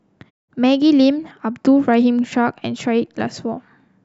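Nothing in this bit of speech stands out as a technical fault, so there's no problem here to point to.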